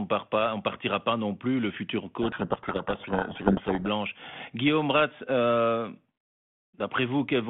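From 2.22 to 3.88 s the speech is buried in harsh, grinding distortion. This is a codec payload misread: the G.726 code words arrive with their bit order reversed, so the decoder misinterprets every sample difference until both ends agree again.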